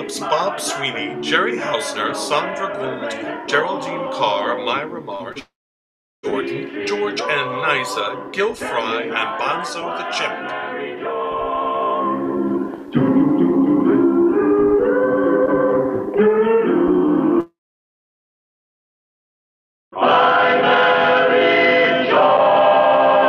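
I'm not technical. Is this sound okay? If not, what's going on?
No, there are gaps. Around 5.15 to 5.23 s and again 5.32 to 5.38 s you get short concealed packet loss: about 40 ms of sound each time never arrived, so the player faked a stand-in from the last bit it had. That's the quick smear or blip you hear.

Right after, from 5.39 to 6.26 s, and again from 17.40 to 19.95 s, the sound fizzles into a fading buzz and then goes quiet, roughly 0.7 s and 2.4 s of silence. It then picks up further on with that stretch simply gone, most likely a long network dropout.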